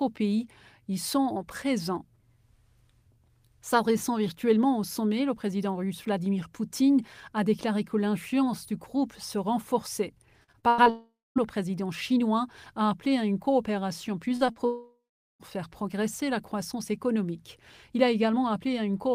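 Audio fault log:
10.43–10.88 s, repeated packet loss (robotic sound): five gaps, the longest 93 ms, patched by repeating sound, giving choppy chatter with pieces missing; the spectrogram shows smeared, striped blocks.
10.90–11.38 s, long network dropout: the sound fades into a buzz or hiss, then about 240 ms of silence, likely from lost packets; the waveform shows a tapering tail, then a flat line.
14.36–14.43 s, burst of packet loss: about 40 ms lost and bridged by continuing the last sound at falling level; a brief fading smear, with softened spectral detail.
14.47–14.50 s and 14.52–14.58 s, short concealed packet loss: 20 ms and 40 ms holes filled from preceding sound, heard as quick wobbles; the spectrogram shows short blurred patches.
14.66–15.42 s, long network dropout: about 740 ms missing, with a decaying buzz or hiss and then about 410 ms of silence, likely network loss; the waveform flattens before audio resumes.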